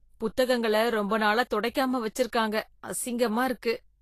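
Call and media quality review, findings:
Encoder running at low quality, likely Vorbis compression, throughout; fits a bitrate near 34 kbps. Nothing above 14.2 kHz; coarse treble quantisation leaves hissy, grainy speech and blurred attacks.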